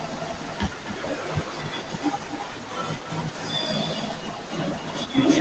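From start to finish, every phrase has a faint second copy trailing it by roughly a third of a second. That's echo with no canceller: the far end is playing the call out of a loudspeaker, its microphone is picking it back up, and nothing strips it out before it returns. The copy sits about 13 dB under the direct speech and sounds thinner, with the top end already capped near 8 kHz by the call codec.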